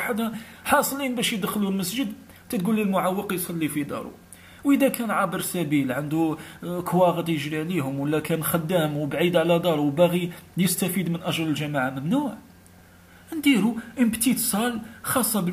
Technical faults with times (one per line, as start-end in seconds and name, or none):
none